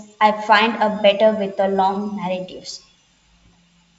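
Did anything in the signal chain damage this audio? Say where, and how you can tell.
No, nothing in the signal chain stood out as damaging this speech on listening.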